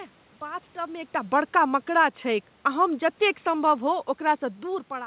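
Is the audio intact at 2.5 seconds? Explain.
No. At 2.5 seconds the speech is inside a stretch of automatic gain falling, from 2.27 to 4.89 s. The gain control judged the input too loud or its background noise too strong and eased its gain down by about 3 dB. Voice and room noise sink together, and a waveform shows the envelope tapering steadily across that span.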